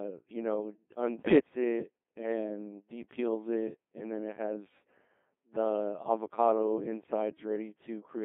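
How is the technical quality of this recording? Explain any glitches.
The technical quality is poor: the speech has been through a very low-rate vocoder from start to finish, and there is one short burst of corruption early on.

Codec 2 vocoder, throughout: the decoder rebuilds the speech from sine waves using only pitch, voicing, energy and a spectral outline, which fits about 2.4 kbit/s. The damage is heavy: the voice sounds robotic and buzzy, confined to roughly 200 Hz to 3.6 kHz.

Bit errors on digital voice radio, 1.18 to 1.40 s, between "you know" and "it and depeels it": around 3 percent of bits flipped, corrupting pitch, level and spectral parameters across a stretch that fits about seven frames. The synthetic voice lurches in pitch and loudness, breaking into warbling, bleepy gibberish.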